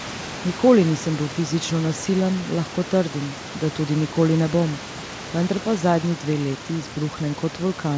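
No technical faults can be heard anywhere in the speech. Room noise sits about 16 dB below the voice, and the call path leaves nothing above 8 kHz, which fits a wideband G.722 codec.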